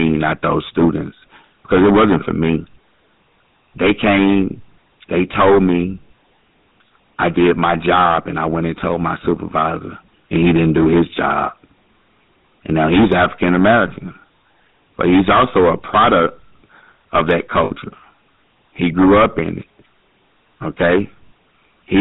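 From the start, the speech is driven about 15 dB past what one stage can pass, so hard clipping slices the peaks flat, catching around 7 percent of the signal. Those squared-off tops spray harmonics high into the spectrum, and with overload this heavy every stressed syllable turns into a harsh, buzzing fuzz rather than occasional crackle on the loudest moments.

Running under the whole clip as well is the GSM full-rate codec, its character pointing to the 13 kbps coder used on early mobile calls. It rebuilds the voice from a vocal-tract model fed by a sparse, evenly spaced pulse train, and nothing reaches past 4 kHz. The damage is plainly audible: a dull, band-limited sound with a gravelly, buzzy roughness threaded through it.

At 17.64 s, just after "of that", lost GSM frames cause a 60 ms dropout lasting to 17.71 s, which fits three consecutive 20 ms frames going bad. The decoder fills the gap by repeating the last good frame's settings, so instead of silence the sound freezes into a short, rough metallic ring before normal decoding picks up again.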